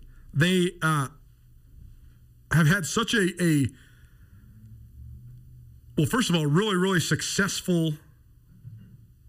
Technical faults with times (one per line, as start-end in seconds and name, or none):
0.00-9.29 channel delay (comb filtering)